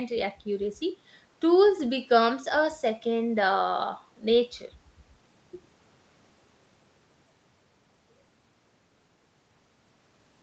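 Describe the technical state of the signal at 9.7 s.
At 9.7 s the speech is intact, with no fault present, and the sound simply carries the normal band limit of the call path, with nothing above about 8 kHz.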